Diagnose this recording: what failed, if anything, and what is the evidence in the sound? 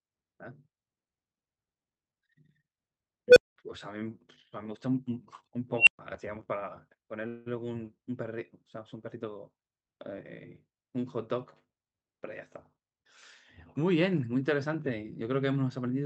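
Unstable filter at 3.28 to 3.56 s and again at 5.76 to 5.99 s, in the call processing stage. The first event is a tone around 500 Hz that swells over about 81 ms, clips, then drops to about 200 ms of silence. The second is a squeal near 3 kHz that builds over about 106 ms, followed by about 120 ms of silence. A recursive filter with bad coefficients let its output grow without bound until the arithmetic overflowed and the filter reset.

Call audio freeze at 7.27 to 7.48 s, at the network stage. The speech gives way to a fading buzz or hiss lasting about 187 ms, then resumes where it stopped with nothing lost. The whole remainder of the clip is therefore shifted about 187 ms later. This is likely a jitter-buffer underrun from delayed packets: the receiver extended the last sound until the packets arrived, which inserted a gap rather than dropping audio.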